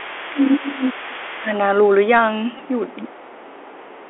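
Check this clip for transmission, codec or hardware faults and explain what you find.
Four faults are present: a narrowband headset codec across the whole clip, and leakage, suppression and a packet repeat at set times.

The Bluetooth CVSD headset codec runs from start to end. CVSD sends one bit per sample, up or down, with an adapting step. The line here is confined to roughly 300 Hz to 3.4 kHz, so the sound is thin and boxed. The codec damage is plainly audible: loud high sounds outrun the step and rasp, s sounds turn scratchy, and a granular hiss sits underneath.

Another voice leaks through from 0.00 to 1.03 s and again briefly from 1.27 to 1.32 s. It sits far below the main talker, around 25 dB down. This is likely the other side's voice leaking through: a loudspeaker at the talker's end feeding the microphone, with the echo canceller leaving a residue. It sounds faint.

The talker's level dips from 0.05 to 1.52 s, by up to about 20 dB. 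It dips again from 2.96 s to the end, by up to about 30 dB. Parts fade. The likely cause is speech suppressed in double talk. Both sides talked at once, and the echo canceller, unable to separate them, turned its own talker down.

A Bluetooth headset packet repeated at 2.58 to 2.60 s. About 11 ms of sound was lost, which fits three lost packets. The chip decoded the previous packet again each time. Repeating every 3.75 ms, it gives a brief buzz near 267 Hz before clean audio resumes.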